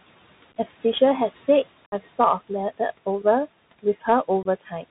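Right from the start the whole thing sits behind a Bluetooth CVSD headset codec, and the damage is plainly audible. Everything above 4 kHz is gone, so the speech has that boxy narrowband feel. The one-bit up-or-down coding can't keep pace with loud bright moments, so sibilants come out scratchy and there's a grainy hiss running under the speech. All of that points to the usual 64 kbps CVSD headset link.

On top of that there are noise suppressor artifacts through the whole clip. The suppressor pulls the background down by about 17 dB wherever it decides the sound is steady noise, working frame by frame. The room noise sits about 19 dB under the speech, so you hear it dip away in the gaps and creep back up under the talking.

Then there's unconcealed Bluetooth headset packet loss, three times. Between 0.52 and 0.57 s about 26 ms goes missing, scattered over roughly 38 ms with no single hole longer than about 11 ms. 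That comes across as a quick crackly chop rather than one clean gap. At 1.86 to 1.94 s it's the big one, 60 ms of speech missing, roughly 15 packets' worth. It has hard edges, and the speech comes back a touch quieter for a moment. Finally, from 4.43 to 4.47 s there's another 22.5 ms dropout that gives a short, abrupt break.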